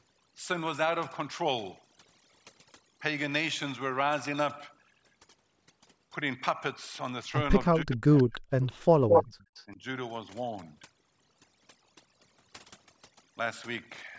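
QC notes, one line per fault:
Throughout: overdone noise removal. The background drops and breaks up into twinkling specks, as narrow frequency bands lying close to the estimated noise floor are pulled far down or switched off, taking quieter parts of the speech with them.
7.7–8.33 s and 9.66–9.82 s: speech suppressed in double talk. The speech dips sharply, by about 40 dB at its deepest in the first stretch and about 10 dB in the second, likely because an echo canceller could not tell the near talker from loudspeaker echo and turned both down.
8.17–8.39 s, 8.61–8.79 s and 9.09–9.65 s: echo leak. A delayed copy of the speech comes back, 318 ms late and about 20 to 25 dB down in the first two stretches, then 215 ms late at about the level of the speech itself, likely residual echo that a speakerphone canceller failed to remove.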